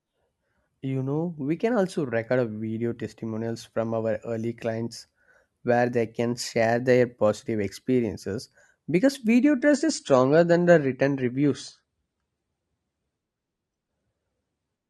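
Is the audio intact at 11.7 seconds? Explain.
No. At 11.7 s the clip is inside a stretch where an adaptive stream at a lower bitrate is playing, from 9.41 s (right after "their positive experiences because") to the end at 14.89 s. The stream switched to a leaner encoding when the connection slowed, so the treble is duller and codec artefacts are heavier, with a sudden change and no gap. This is consistent with AAC dropping from around 96 to 32 kbit/s. A spectrogram shows a hard ceiling at 9.7 kHz from 9.41 s onward, while the waveform stays continuous.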